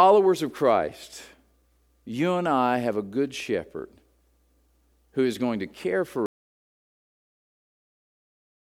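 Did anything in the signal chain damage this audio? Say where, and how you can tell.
Yes, there's an audio dropout to silence near the end. Right after "is going to care", at about 6.26 s, the speech cuts off mid-flow and the track goes to dead silence, with no room tone or noise floor at all, and it stays that way to the end. That clean silence points upstream of the recorder: the input likely got lost, a device unplugging, a link failing or a mute slipping in, while the recorder kept writing empty samples.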